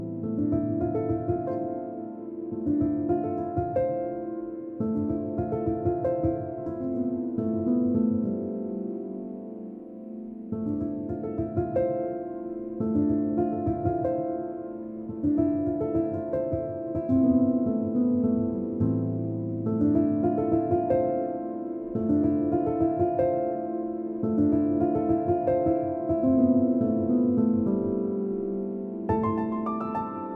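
Nothing goes wrong anywhere in this audio, so there's no fault to point to at any moment.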